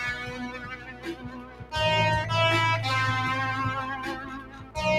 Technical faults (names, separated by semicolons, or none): noise suppressor applied to music or sounds; sound cut by the noise suppressor